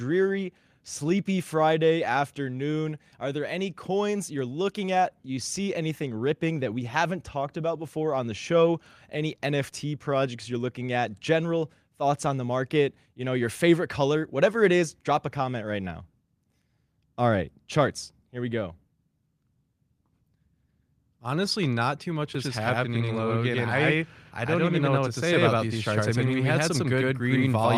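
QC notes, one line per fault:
22.35 s to end: doubled audio track. A dry, full-band second copy trails roughly a tenth of a second behind at about equal loudness and cuts in abruptly, likely from a slower second capture path.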